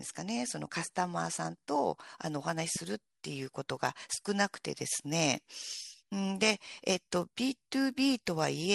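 A steady 100 Hz buzz rides on the speech from 2.01 s to the end, sounding during the talking and dropping away in the pauses. This is a resampler restarted on every block. The audio was converted in separate 10 ms chunks, which fits an upsampling from 24 kHz to 48 kHz, and each restart lacked the neighbouring samples at the chunk edges. The small error left at every boundary repeats at the block rate.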